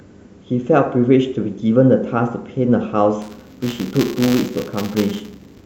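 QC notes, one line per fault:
3.22 s to the end, buffer tearing: a steady robotic buzz at 200 Hz rides on the speech and lasts until the clip stops. It means the writer and reader of the playback ring buffer have drifted together and cross once per 5 ms period. Each period therefore carries a small sliver of stale audio from about 15 ms earlier, spliced in with hard edges on both sides. That repeating discontinuity is the rattle, and it sounds only while there is signal.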